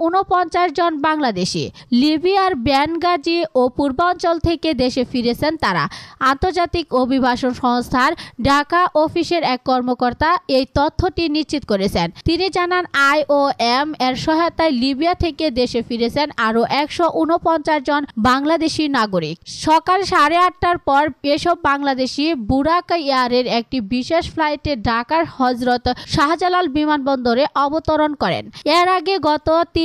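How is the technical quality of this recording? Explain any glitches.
No glitches or technical faults are audible anywhere in the recording, so there is nothing to explain.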